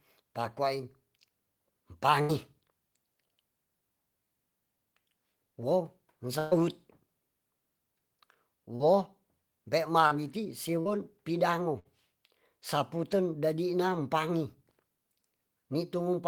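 At 2.21 to 2.31 s the speech smears into a held, fading buzz or hiss for about 75 ms, then jumps ahead past roughly 80 ms of missing audio. This is a burst of packet loss: the receiver stretched the last sound to cover packets that never arrived in time. The same happens at 6.39 to 6.53 s, with about 124 ms of fill and 120 ms lost, and at 11.79 to 11.87 s, with about 57 ms of fill and 60 ms lost.

Brief smears or wobbles at 8.75 to 8.82, 10.08 to 10.13 and 10.81 to 10.87 s, each around 40 ms, are short concealed packet loss, where the decoder patched the gap and blended back.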